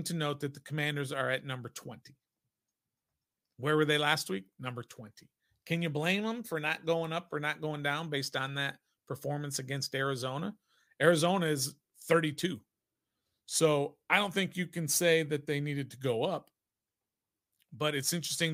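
Nothing stood out on listening to the speech recording.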